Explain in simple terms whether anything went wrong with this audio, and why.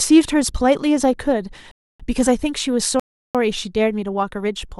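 The speech stops twice with a rebuffering stall, from 1.71 to 2.00 s and from 3.00 to 3.35 s. The player ran out of downloaded audio and waited, adding about 0.28 s and 0.35 s of silence. Nothing is skipped.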